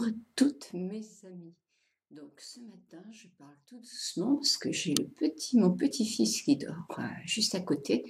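Twice in the audio the gain is moved in coarse, unsmoothed steps, around 150 per second, instead of gliding, and each jump leaves a tiny click, producing zipper noise. From 0.41 to 1.16 s the level drops by roughly 25 dB, and from 3.77 to 4.35 s it climbs back by about the same amount. Across both moves a fine buzzing tick rides on the sound.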